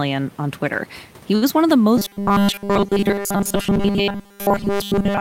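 At 1.35 to 1.44 s, the speech holds a sound too long, with a faint buzz or dip, then resumes where it left off. This short stall from a late packet happened because the jitter buffer ran dry and the receiver stretched about 65 ms of audio, losing nothing but adding 65 ms of delay.

From 1.97 s to the end, the speech turns into a rigid, metallic buzz at 200 Hz that only loosely tracks the words. This robotic sound from repeated short buffers is likely caused by audio arriving too seldom, so nearly everything is replaced by a 5 ms fragment looped over and over.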